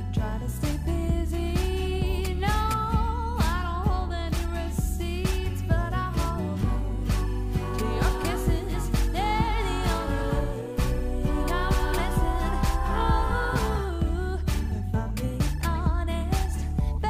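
No faults are audible anywhere in the recording.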